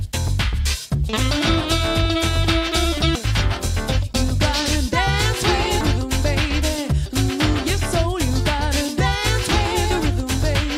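At 3.15 s, damaged data in the compressed stream produces a brief blip. The decoder misreads corrupted frames there, loses sync and must find the next frame header.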